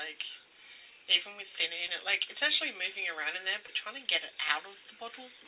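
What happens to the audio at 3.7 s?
A short concealed packet loss occurs from 3.66 to 3.70 s: about 20 ms of audio arrived too late for the decoder, and the receiver bridged the gap by extending the preceding sound before blending back. It is heard as a brief smear or wobble.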